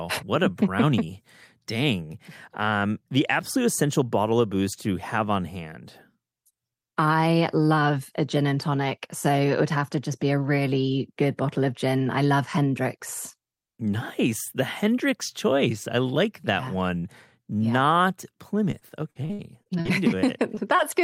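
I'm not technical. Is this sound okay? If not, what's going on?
No. From 18.7 to 19.9 s there is repeated packet loss, which gives a robotic sound: pieces of the call kept going missing, each gap up to about 58 ms, and the receiver patched each one by stretching the last sound. The holes come so close together that the audio turns choppy and machine-like instead of dropping out once.

Right after, at 20.55 to 20.59 s and again at 20.77 to 20.80 s, there is short concealed packet loss. Each time a few hundredths of a second went missing once and was smoothly filled in, the second time only partly. That leaves only a brief smear or wobble, with none of the continuous robotic chopping heard just before.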